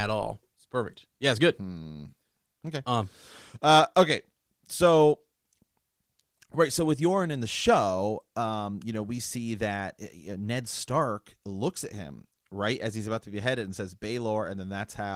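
Nothing stood out as a technical fault on listening to this speech recording.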